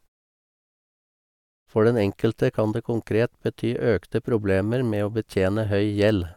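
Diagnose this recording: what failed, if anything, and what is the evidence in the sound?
Nothing failed at any stage of the chain; the speech and the quiet gaps between phrases show no defect worth flagging.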